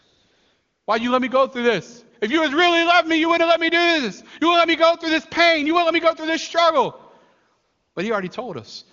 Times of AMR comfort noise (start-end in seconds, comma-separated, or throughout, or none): 0.00-0.87, 7.63-7.95